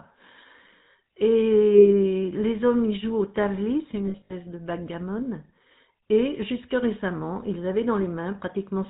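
Throughout, the speech carries the buzzy, gravelly roughness of the GSM full-rate codec, with nothing above 4 kHz, consistent with 13 kbps; unlike simple band-limiting, it adds pulse-driven grit. At 1.75–1.9 s, lost GSM frames hold the sound for about 40 ms as a rough metallic ring, not a silent dropout. From 4.06 to 4.33 s, scattered frame losses ring again, with gaps spread over 240 ms and the longest run around 70 ms.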